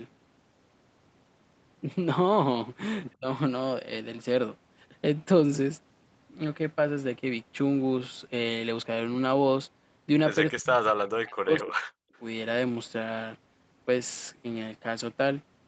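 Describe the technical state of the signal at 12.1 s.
Speech suppressed in double talk runs from 10.48 to 12.13 s, so 12.1 s falls in its final moments. The speech dips and breaks up over roughly one and a half seconds, with the deepest drop around 40 dB. The likely cause is an echo canceller that, faced with both ends talking at once, could not tell the near talker from loudspeaker echo and attenuated everything together.

An echo leak follows immediately, from 12.14 to 12.19 s. A brief, faint copy of earlier sound returns 213 ms late, sitting roughly 40 dB below the speech. This is likely residual loudspeaker pickup that the far side's echo canceller failed to remove and sent back into the call.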